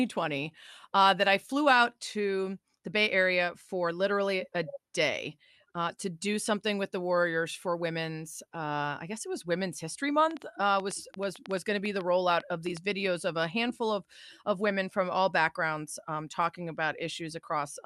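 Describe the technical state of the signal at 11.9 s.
At 11.9 s the speech sits inside a train of clicks running from 10.31 to 12.78 s: about twenty irregularly spaced pops at roughly 7.3 per second, peaking about 5 dB above the signal, likely from interference. They show as thin vertical broadband streaks and sharp waveform spikes.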